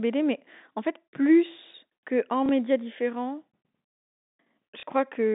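Speech over a G.711 telephone line loses audio twice through packet loss with the last packet repeated: the receiver replays old audio for 30 ms, consistent with one dropped 30 ms packet, at 2.46–2.49 s just after "fait plus que en" and at 4.80–4.83 s, giving a small blip each time.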